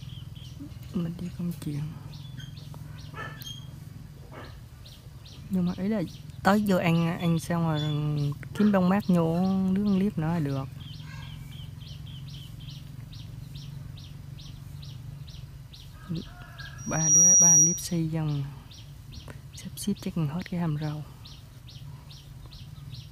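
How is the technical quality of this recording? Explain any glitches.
The recording has one clear fault, a burst of loudspeaker feedback squeal from 16.78 to 18.00 s. A microphone was picking up the speaker it fed, and at 5.8 kHz the loop gain passed unity, so that tone fed on itself, swelling over roughly 0.4 s into a piercing whistle that ends up around 15 dB above the surrounding sound. On a spectrogram it appears as a bright, narrow horizontal line at 5.8 kHz; the waveform shows a rapidly growing envelope.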